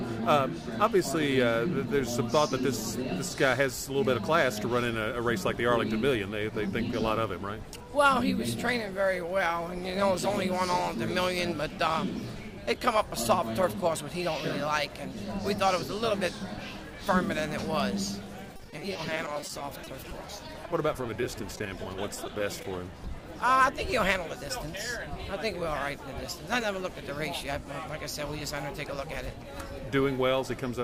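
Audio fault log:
18.56–22.65 s, repeated packet loss (robotic sound): dozens of short holes, none longer than 30 ms, arrive one after another. About 570 ms is patched by extending the preceding sound and 440 ms simply vanishes, giving a choppy stutter rather than one clean dropout.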